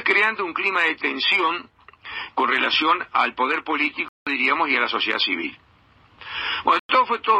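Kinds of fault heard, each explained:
Bluetooth stall: sound drops to silence for 0.18 s at 4.08 s and 0.10 s at 6.79 s, then resumes, likely from interference-delayed packets emptying the headphone buffer.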